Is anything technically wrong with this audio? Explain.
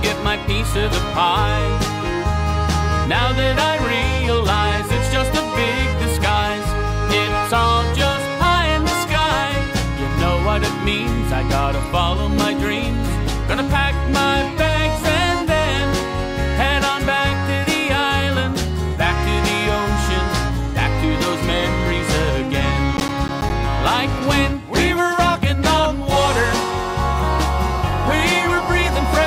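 Yes. From 22.97 to 23.52 s there is processor overload crackle. The processor fell behind and missed a run of audio buffer deadlines, and each missed buffer played out as silence. The burst points to something like seven misses of roughly 10 ms each. It is heard as a gritty tearing crackle over the sound. A waveform would show short flat dropouts with abrupt edges, and a spectrogram would show thin vertical broadband streaks across that half-second.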